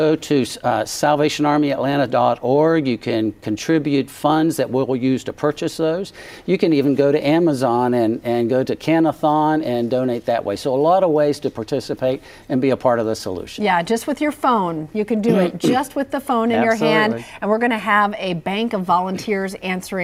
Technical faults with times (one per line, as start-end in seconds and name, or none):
none